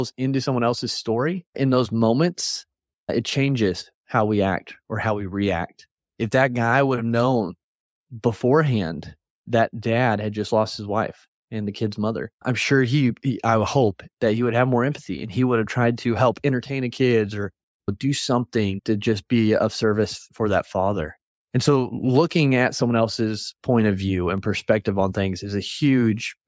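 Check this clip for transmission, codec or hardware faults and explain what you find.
No faults detected.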